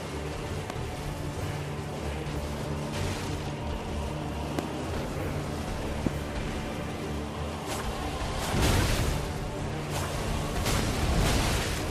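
Loud pops strike at 0.70–0.72, 4.59–4.61, 6.07–6.09 and 10.79–10.82 s, each a single sharp thump about 15 to 20 dB above the sound, likely from a brief voltage spike. On a waveform each is a tall narrow spike; a spectrogram shows a full-height vertical line.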